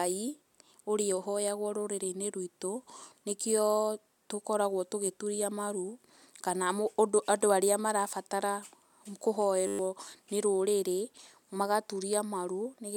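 In this speech clip, from 9.67 to 9.79 s the sound collapses into a steady 100 Hz buzz: a system hang loop, where the system or driver froze while the sound hardware kept replaying one 10 ms stretch of its ring buffer, so about a tenth of a second of real audio is lost.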